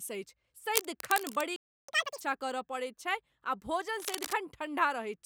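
From 0.74 to 1.42 s there's cable scratch noise, a rough, uneven rustling only about 5 dB under the speech, likely a worn cable or connector being moved. At 1.56 s the speech just drops out for about 0.32 s. That's a playback stall, likely the player starving for data or getting blocked. When it comes back at 1.89 s you get catch-up at higher speed: double rate until 2.21 s, with the pitch jumping close to ten semitones before it settles. The same scratching returns from 4.00 to 4.33 s.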